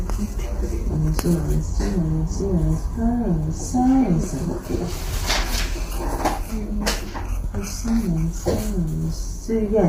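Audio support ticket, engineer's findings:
Grainy, rough texture across the whole clip, with noise filling gaps between tonal components. Top band thin and synthetic-sounding, nothing audible above 15.6 kHz. Likely low-delay AAC compression (AAC-ELD). Short ~10 ms frames give coarse frequency resolution, and heavy quantisation at this level fits a low bitrate of around 24 kbps, leaving a reconstructed, band-limited top end.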